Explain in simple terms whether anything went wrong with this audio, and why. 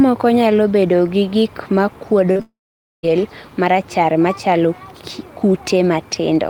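Something did go wrong, and it's all bunched together just after 2.3 seconds into the speech.

First there's short concealed packet loss at 2.31 s and again at 2.37 s. About 40 ms and then 20 ms of audio arrived too late, so the receiver bridged each gap by stretching the last bit of sound. You hear a quick smear or wobble rather than a clean cut.

Right after that, from 2.41 s to 3.05 s, the audio vanishes for about 0.6 seconds, most likely a long network dropout. The last sound gets dragged on briefly as a fading buzz, then roughly half a second of near silence follows before the speech comes back with that stretch missing.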